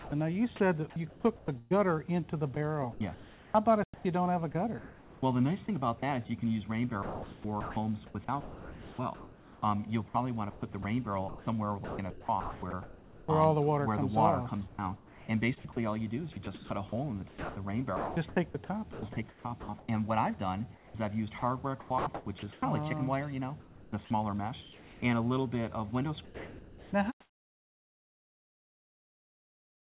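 From 0.0 to 1.73 s, 2.55 to 6.03 s, 7.03 to 13.29 s, 14.69 to 19.89 s, 20.75 to 22.63 s and 23.61 to 25.03 s, the sound is chopped by the voice detector. Quiet parts vanish into synthetic fill, about 0.6, 1.1, 3.2, 1.9, 0.7 and 0.8 s in turn. The likely cause is a detector gating transmission on and off. The result sounds choppy.

From 26.25 to 26.93 s, sound is dropped by the voice detector. About 0.68 s of real audio is lost. The detector likely judged it to be background and stopped sending. Steady noise stands in for it until the end of that gap.

From 26.25 s to the end, comfort noise replaces the background. About 3.4 s of real ambience is swapped for a flat, featureless hiss. This likely comes from discontinuous transmission, with the receiver filling the pause. Like the rest of the clip, it carries nothing above 4 kHz, which fits a G.711 call codec.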